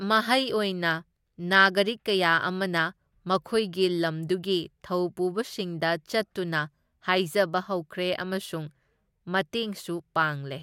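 From 0.12 s to 10.56 s, faint regular ticks run through the speech about ten times a second, roughly a hundred in all: clock slip clicks. Likely cause: two unsynchronised clocks differing by about 200 ppm, dropping or repeating one sample per slip.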